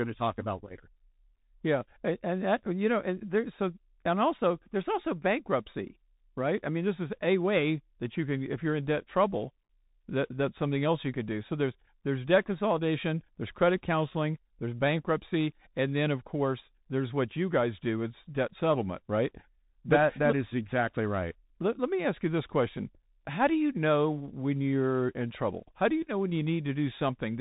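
Throughout, the speech sounds scratchy on s sounds, with a granular hiss beneath and nothing above 3.8 kHz: Bluetooth CVSD headset codec damage, its one-bit adaptive steps failing to track.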